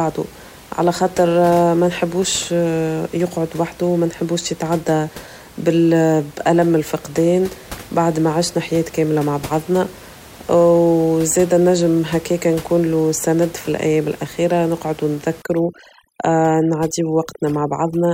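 From 15.42 s, after "سند فالايام الاخيرة نقعد", overdone noise removal strips bands near the noise floor, leaving twinkling specks; the spectrogram shows speckled, gapped patches where room noise, about 22 dB below speech, had been.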